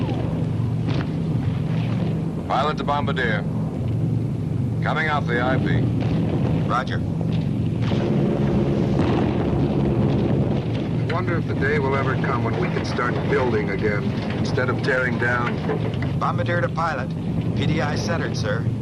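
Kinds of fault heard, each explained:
MP2 compression: Audio this dull and granular is likely the result of MPEG Layer II coding at a low rate, where the encoder shares too few bits among its 32 sub-bands and shuts off the upper ones. Here the top end is missing throughout, the remaining bands are coarsely quantised, and the damage is plainly audible as a gurgling texture under the whole clip, consistent with a stream of around 80 kbps.
DAB burbling: Weak reception lets bit errors slip past error correction into the MP2 data, so corrupted samples and scale factors briefly push individual sub-bands to the wrong level. In this clip a small fraction of bits went bad, causing short bursts of burbling at 7.21 s and from 14.38 to 14.47 s. Each burst spans what sounds like a few coded frames before the sound settles again.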